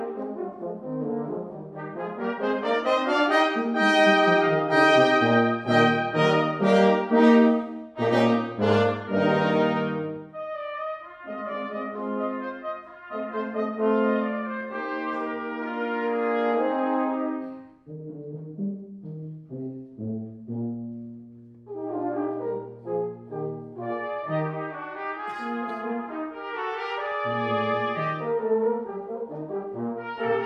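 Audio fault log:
No fault is entered in the audio fault log.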